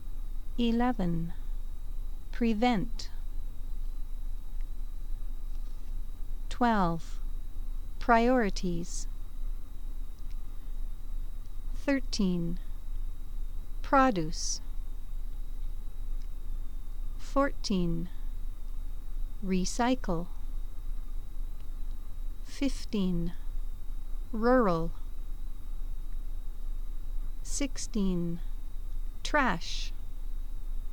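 No technical faults can be heard anywhere in the audio, and the signal stays steady and intact for its whole duration.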